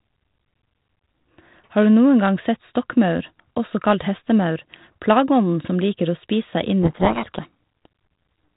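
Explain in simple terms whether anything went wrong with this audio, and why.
Yes, something went wrong. From about 6.83 to 7.86 s the speech drowns in harsh, gritty distortion. That's a codec payload misread: the phone-line codec's bits arrived in the wrong order, so the decoder rebuilt garbage until both ends matched up again.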